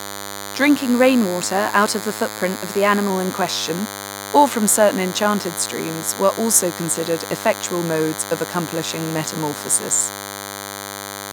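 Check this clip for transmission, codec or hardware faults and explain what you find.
Two faults are present. A DECT cordless phone buzz runs through the entire recording. A drift correction step affects the speech from 0.77 s to 3.10 s.

Throughout, a nearby DECT handset or base station emits radio bursts 100 times a second, and the audio circuitry rectifies them into the signal. The result is a thin, steady 100 Hz buzz rich in harmonics, sitting only around 10 dB beneath the speech.

From 0.77 s to 3.10 s, the playback rate jumps in a single step, likely clock-matching software adjusting its buffer. The speech plays about 5.25% fast and 88.6 cents sharp, nearly a semitone, before snapping back to normal speed and pitch.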